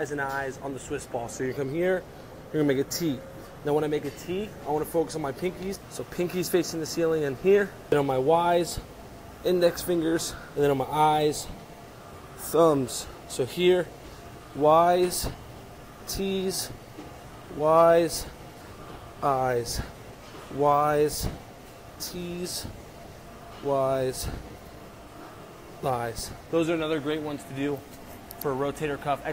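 At 5.75 to 5.78 s the sound jumps abruptly ahead with a brief blip, the likely result of a stream segment skipped, where one chunk failed to load and playback resumed at the next. The waveform shows a hard splice, and the spectrogram a thin vertical line.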